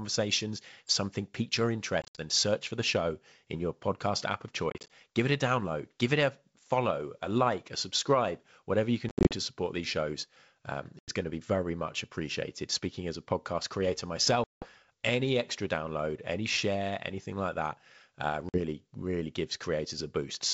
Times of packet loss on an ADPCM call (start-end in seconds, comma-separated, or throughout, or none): 2.02-2.21, 4.70-4.90, 9.09-9.35, 10.99-11.10, 14.44-14.69, 18.49-18.59